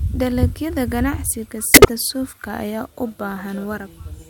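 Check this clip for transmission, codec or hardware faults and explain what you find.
One transmission fault is audible in the speech: a corrupt frame decoded from 1.74 to 1.89 s. Flipped bits in a run of roughly seven compressed frames were decoded anyway, misplacing energy across frequencies. It sounds like a harsh chirping burst, showing as a sudden waveform spike and a smeared block of misplaced energy on a spectrogram.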